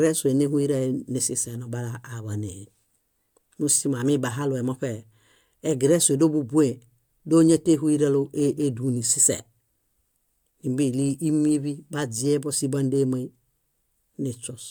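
Nothing in the speech recording stood out as a technical problem on listening.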